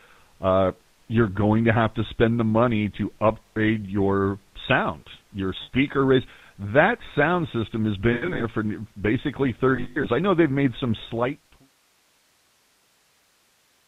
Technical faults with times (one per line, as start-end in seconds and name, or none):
0.00-13.87 GSM full-rate codec
3.44-3.58 lost GSM frames
5.62-5.69 lost GSM frames
8.12-8.45 lost GSM frames
9.76-10.06 lost GSM frames